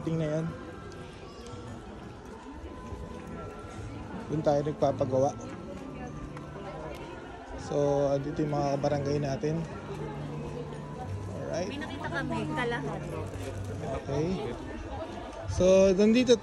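No technical faults are audible.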